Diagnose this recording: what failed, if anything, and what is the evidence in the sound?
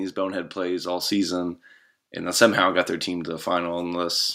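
Call processing stepped the microphone volume up at 1.02 s, just after "bonehead plays all". Voice and background both jump about 5 dB and stay raised, unlike gradual compressor pumping.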